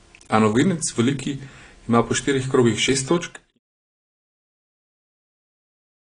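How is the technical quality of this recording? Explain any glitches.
The speech has audible lossy-codec damage from start to finish, most likely AAC compression at a low bitrate, somewhere around 32 kbps. Starved of bits, the encoder trims the top end and quantises coarsely, so the speech sounds dull and smeared, with a watery, fizzy edge on sibilants. The level ends in an intended fade out, from about 3 s to 3.59 s.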